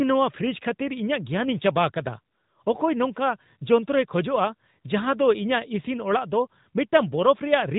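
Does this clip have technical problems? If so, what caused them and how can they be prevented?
Yes. AMR narrowband mobile codec damage runs through the whole clip and is plainly audible. The speech has passed through an 8 kHz phone-band coder that rebuilds the voice from a vocal-tract model excited by a few pulses per 5 ms subframe, so everything above 3.8 kHz is gone and the voice has a buzzy, synthetic edge, consistent with a mid-range rate around 10 kbps. Recording or transmitting over a wideband or higher-quality codec path would prevent it.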